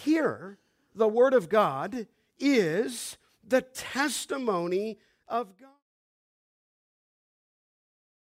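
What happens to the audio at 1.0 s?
At 1.0 s the speech plays through cleanly, with no dropout, click, distortion or level change at that moment.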